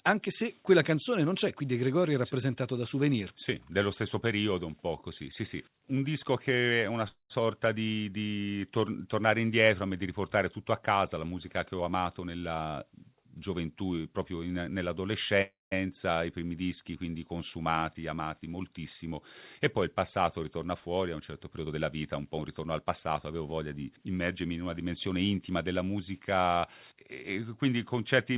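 At 7.08 s the speech stops and the last sound carries on as a short fading buzz, then goes silent for about 140 ms before resuming at 7.32 s with nothing lost. This is a call audio freeze: the jitter buffer likely ran empty while packets were delayed. The receiver stretched the final sound and inserted a 218 ms gap, so everything afterward plays 218 ms later.

Right after "casa la musica che", from 11.74 to 12.66 s, the speech sounds hurried but keeps its pitch, running at 124% speed. This is a jitter buffer speed-up. The buffer had built up surplus audio, and the receiver cut out roughly 200 ms as a series of tiny pitch-period slices to reduce the delay.

At 15.42 s a second call audio freeze occurs. The sound again trails off into a brief buzz and about 180 ms of silence, then resumes at 15.73 s. This time 295 ms of gap is added, likely from another stall in packet arrival that emptied the buffer.

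Two more speed-ups follow. From 17.71 to 18.14 s, between "i primi dischi quindi" and "moltissimo e poi il", the pace rises slightly to 109%, with about 50 ms trimmed. From 21.58 to 23.14 s, between "fuori a un certo" and "avevo voglia di immergermi", it runs at 115%, losing roughly 200 ms. The band-limited sound throughout, with nothing above 4 kHz, comes from the G.711 call codec.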